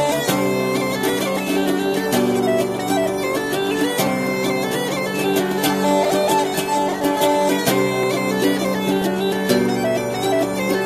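At 6.05 s, 7.04 s and 8.03 s the audio has a tiny skip, one per second, from overlap between stream segments. Overlapping time stamps on roughly 1-second segments caused 8 to 17 ms of real sound to be trimmed, so the waveform jumps.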